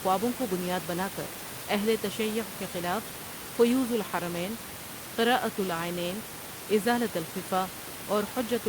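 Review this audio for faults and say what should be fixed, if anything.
Nothing here needs fixing; the only thing in the background is the normal noise of the room, sitting about 10 dB under the speech.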